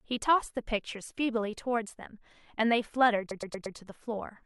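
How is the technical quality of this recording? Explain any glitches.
One glitch stands out. From 3.30 to 3.76 s, repeated frames make the speech stutter: a 116 ms block of compressed frames plays four extra times, adding 0.46 s. A spectrogram would show identical copies side by side, and the waveform would show a matching shape repeating.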